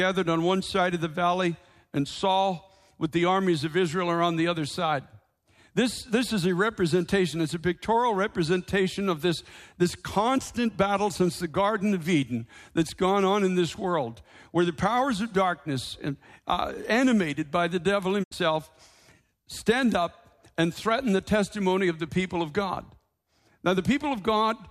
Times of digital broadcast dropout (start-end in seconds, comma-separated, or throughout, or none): 18.22-18.33